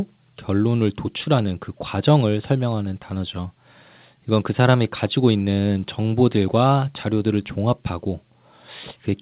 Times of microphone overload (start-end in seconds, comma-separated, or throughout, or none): none